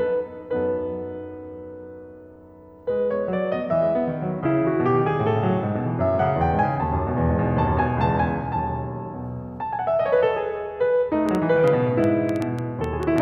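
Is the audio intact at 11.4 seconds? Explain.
No. A train of clicks runs from 11.29 to 13.19 s over the music. About ten similar pulses arrive unevenly, around 5.3 per second. They peak roughly 10 dB above the signal as sharp ticks. The likely cause is interference or a faulty connection.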